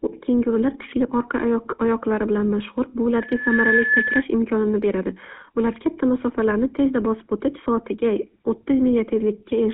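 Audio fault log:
throughout: GSM full-rate codec. The sound has a buzzy, gravelly roughness. The coder models the vocal tract and drives it with sparse, regularly spaced pulses, which fits 13 kbps full-rate coding. The band runs from 200 Hz to 3.4 kHz, so everything higher is gone.
2.41–2.46 s: GSM bit errors. A brief squawk and gargle breaks through. Corrupted bits reached the decoder, so its filter, pitch and gain values came out wrong. The spectrum bent and the level jumped for what sounds like a few frames.
3.16–4.23 s: loudspeaker feedback squeal. A single 1.7 kHz tone swells for about half a second, then sits a few decibels above the sound. The microphone picked up its own loudspeaker, and at this frequency the loop gain exceeded one, so the tone fed itself.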